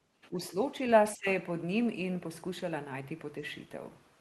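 From 0.22 to 0.29 s a faint second voice leaks through behind the speech, sitting very far down, around 30 dB below the talker. This is the other side's voice leaking through, likely loudspeaker playback that the echo canceller did not fully subtract from the microphone. It is a separate voice rather than a reflection of the talker's own sound, which sets it apart from room reverberation or a delayed repeat.

Right after, from 0.28 to 0.53 s, the talker's level dips by about 10 dB in short patches, and at 1.15 to 1.26 s it drops harder, by about 20 dB. Each is speech suppressed in double talk, likely the canceller turning everything down when both sides overlapped. It differs from packet loss because the voice is turned down by the canceller rather than lost in transmission, and the first dip begins as the leaked voice ends.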